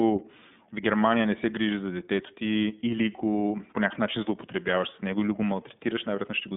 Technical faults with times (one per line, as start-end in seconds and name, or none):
0.00-6.57 iLBC codec